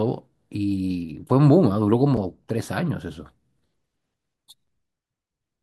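At 2.17 s and again at 4.67 s the speech drops out for about 6.5 ms, a gap between chunks. The audio appears to have been delivered in segments, with a short stretch of silence inserted at each join instead of the next segment starting immediately. The two events sit 2.5 s apart, which fits 2.5-second chunks. Nothing is lost. Each gap is heard as a brief hole or dip in the speech.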